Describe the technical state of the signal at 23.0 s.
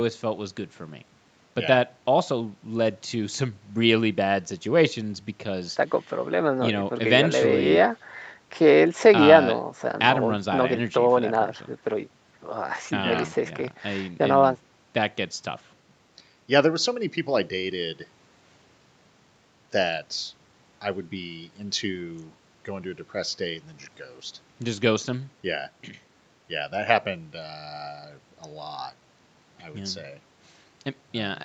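At 23.0 s the speech signal is intact, with no fault present; what can be heard there is the normal band-limited character of the call path, with nothing above about 8 kHz.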